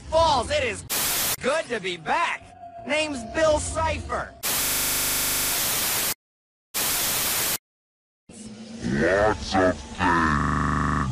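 The audio hits a system hang loop twice, at 4.64 to 5.52 s and again at 10.4 to 11.04 s. Each time, a single 40 ms slice repeats exactly, about twenty times in the first run and a bit fewer in the second, giving a harsh buzzy stutter at 25 Hz. That's what happens when the machine or driver stalls and the sound hardware keeps replaying its ring buffer. Playback picks up again with little or no audio missing.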